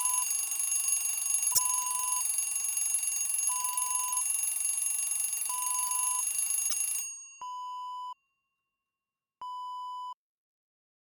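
At 1.50 s and again at 6.65 s there's damaged data in the compressed stream, each about 80 ms of glitch as the decoder misreads corrupted frames and resyncs.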